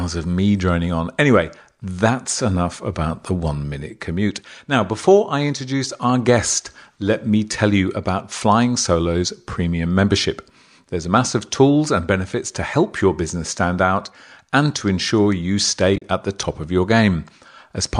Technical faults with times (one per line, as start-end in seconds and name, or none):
15.96-16.04 AAC frame loss with muting